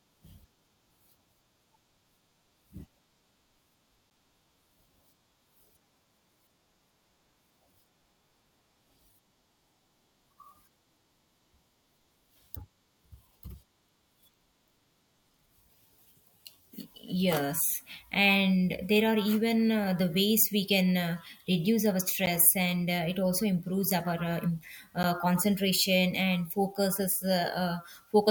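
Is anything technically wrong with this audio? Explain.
Yes. A block of digital silence occurs at 4.1 s, at 22.26 s between "can uh reduce our" and "and uh it also", and at 25.03 s just before "concentration and focuses". Each time, 10 ms of samples drop to silence and return with no fade, so the abrupt edges produce a brief tick rather than an audible gap.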